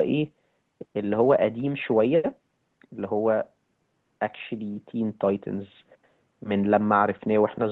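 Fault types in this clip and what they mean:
No fault types are present in this clip.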